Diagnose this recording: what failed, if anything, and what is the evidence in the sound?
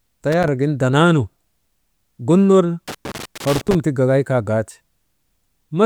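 Loose connector crackle at 0.32 to 0.48 s and 2.88 to 3.75 s: an analogue wiring fault, where a worn contact intermittently breaks, chopping the speech into irregular scratchy bursts.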